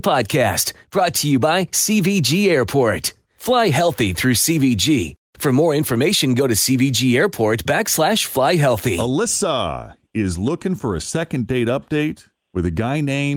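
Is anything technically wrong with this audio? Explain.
No, nothing technically wrong can be heard in this speech recording. There is nothing to point to at any moment in the clip.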